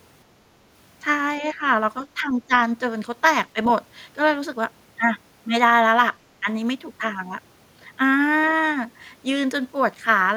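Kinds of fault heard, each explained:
Speech suppressed in double talk: The speech dips twice, from 1.4 to 1.63 s and from 2.15 to 2.51 s. Each drop is roughly 10 dB. The likely cause is an echo canceller mistaking talk for echo and turning both down.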